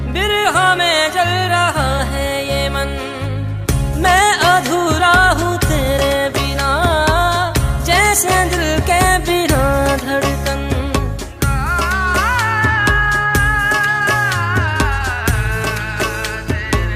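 No technical faults can be heard anywhere in the audio.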